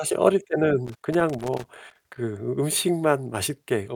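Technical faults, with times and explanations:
0.85–2.18 s, loose connector crackle: an irregular burst of scratchy crackle runs through the speech for about 1.3 s. A worn or dirty contact in the signal path is making and breaking rapidly as it shifts, chopping the audio on and off in quick, uneven bursts.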